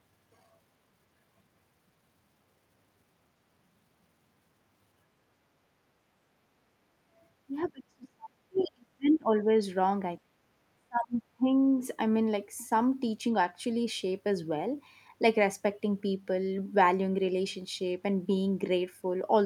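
A speech recording with echo-canceller problems. From 7.05 to 7.16 s the background is gated by the echo canceller: room sound dips about 8 dB, then returns. Speech is suppressed in double talk from 7.66 to 9.54 s and from 10.31 to 11.53 s. The talker drops by roughly 30 dB or more, likely because the canceller clamped down while both sides spoke. From 8.55 to 8.64 s, the other side's voice leaks through as a faint, brief scrap, well below the talker, likely residual loudspeaker echo the canceller missed.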